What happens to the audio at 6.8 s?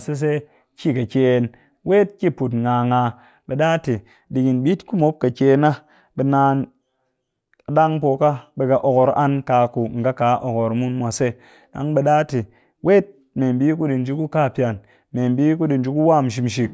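Nothing goes wrong at 6.8 s; the speech continues there without any fault.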